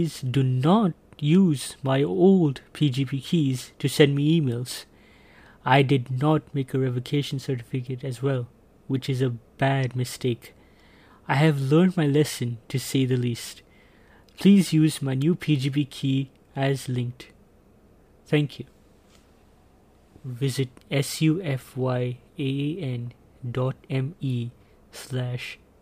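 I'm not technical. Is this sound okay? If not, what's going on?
Yes, nothing wrong is audible anywhere in this recording.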